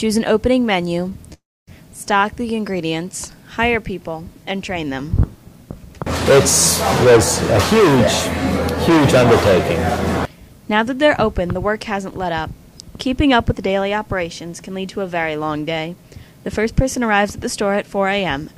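At 1.09 s a sound is briefly held for about 21 ms, a short stall from a late packet: the jitter buffer ran dry, so the receiver stretched audio until it arrived. From 1.33 to 1.69 s the sound turns to a fading buzz and then about 260 ms of silence, a call audio freeze of 340 ms, likely from packets held up in transit. From 12.82 to 13.62 s the audio hurries to 106% speed at unchanged pitch, and again from 15.95 to 16.67 s at 108%. This is jitter buffer speed-up, trimming roughly 50 and 70 ms of pitch periods to cut excess delay.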